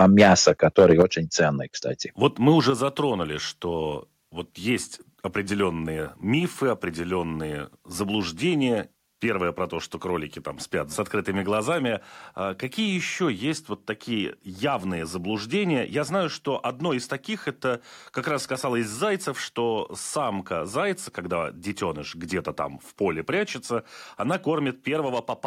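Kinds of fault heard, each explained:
Microphone overload: For the first 1.02 s the peaks sit about 6 dB beyond what the converter can pass. Their tops are squared off, a few percent of samples in all, giving the loudest syllables a crackling, flattened edge, likely from excessive input volume.
Microphone volume stepped down: The whole signal, speech and background together, drops in level abruptly twice: by about 7 dB at 1.02 s, right as the overload ends, then by about 6 dB at 2.7 s, likely from call software cutting the device's input gain.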